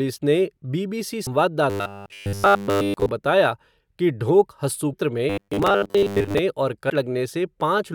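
At 1.26 s there's a quick glitch, the first sign of damaged data in a compressed stream. Some bytes arrived wrong, so the decoder choked on those frames, lost sync and hunted for the next frame header, leaving a tiny blip.

From 1.7 to 3.1 s the speech goes robotic, with a rigid metallic buzz at 100 Hz. That's likely the player repeating a short buffer, which fits a 10 ms chunk looped over and over. Nearly the whole stretch is repeats, so the actual speech is mostly skipped and only its rough shape comes through.

A second glitch from damaged data hits between 4.93 and 4.95 s. It's the same decoder resync.

The robotic sound comes back from 5.3 to 6.4 s, again buzzing at 100 Hz. It likely comes from the same repeated 10 ms buffers. This time roughly 70% of it is repeats, so a bit more of the real speech gets through between the loops.

At 6.89 s there's one last short blip from corrupted compressed data.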